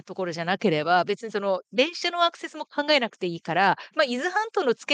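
Speech clip, with no technical faults to report.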